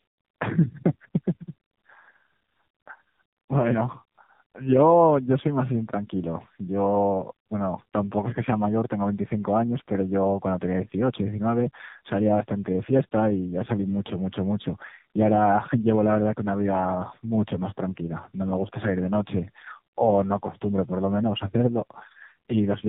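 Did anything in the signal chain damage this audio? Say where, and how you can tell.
Yes: at the codec stage, tandem speech coding runs throughout, with the G.729A output passed through G.711 and coded again as AMR-NB. Each speech coder rebuilds the previous one's errors, so the speech is rough, muffled and warbly, with nothing above 3.8 kHz.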